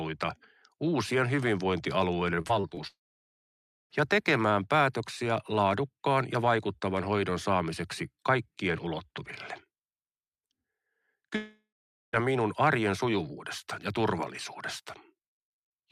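From 2.41 to 2.79 s the speech turns choppy, the signature of repeated packet loss (robotic sound). Several short holes, the longest 25 ms, are patched by extending the preceding audio, so about a quarter of that span is concealment rather than real signal.

At 2.87 s the sound stops for about 1.04 s, returning at 3.92 s. A brief fading continuation gives way to about 0.94 s of silence. This is likely a long network dropout. The same thing happens from 11.36 to 12.15 s: about 0.78 s is lost, including 0.46 s of silence.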